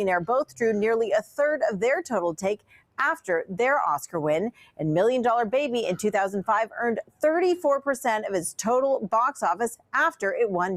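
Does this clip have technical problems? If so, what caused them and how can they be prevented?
Yes. A noise suppressor applied to music or sounds runs through the whole clip: built for speech, it treats sustained tones and decaying tails as noise, so level swings by around 10 dB and the audio pumps. Unlike plain compression, attacks mostly pass while held material sinks. Bypass speech-oriented suppression for non-speech audio.

Sound cut by the noise suppressor occurs at 1.23–1.39 s (about 13 dB down), 2.57–2.99 s, 4.52–4.80 s, 9.76–9.93 s (each about 18 dB) and 7.03–7.23 s (about 17 dB). These are gain dips, not dropouts, since the suppressor turns the sound down rather than cutting it out. Disable or retune the suppressor's thresholds.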